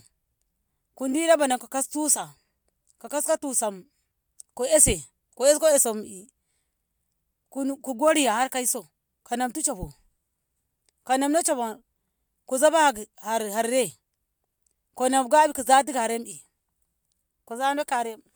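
Nothing in this speech recording stood out as a technical problem on listening.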